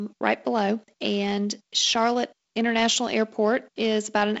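Nothing faulty to report in this speech: the G.722 wideband coding at 48 kbit/s shows only its expected traits, with content ending near 7.7 kHz, a faint hiss in the upper band and a slightly noisier lower band.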